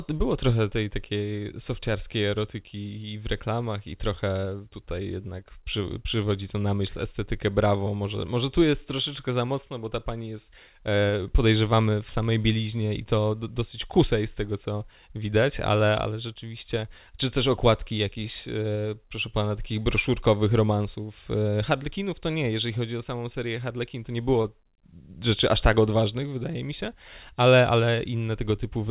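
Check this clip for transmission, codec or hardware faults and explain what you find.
One transmission fault. At 24.42–24.46 s the speech briefly smears as short concealed packet loss: about 20 ms never arrived, and the receiver extended the preceding sound to bridge the gap before the G.711 call audio, band-limited at 4 kHz, resumes.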